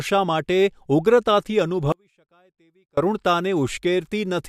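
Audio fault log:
1.92–2.97 s, audio dropout to a faint residue: the speech cuts off abruptly mid-flow and returns just as suddenly about 1.05 s later. Through the gap only a faint sound remains, roughly 35 dB below the signal's normal level, with no fade at either edge. The likely cause is a brief loss of the wanted feed while the downstream path stayed live, so only a faint residue got through.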